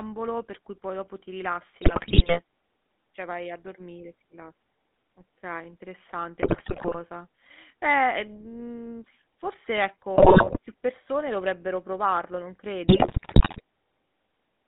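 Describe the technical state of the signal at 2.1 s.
At 2.1 s the speech is inside a burst of GSM bit errors running from 1.82 to 2.41 s, just after "poi dopo ti rilassi". Corrupted filter, pitch and gain values make the decoder squawk, pop and gargle. The spectrogram shows smeared, jumping formant bands, and the waveform shows sudden level spikes across what sounds like a couple of dozen damaged frames.

Beneath that, the GSM full-rate codec is audible throughout. Its vocal-tract model is driven by a coarse, regularly spaced pulse excitation, which gives a buzzy, gravelly texture, consistent with a 13 kbps stream. On a spectrogram the energy sits between 200 Hz and 3.6 kHz, with empty space above and below.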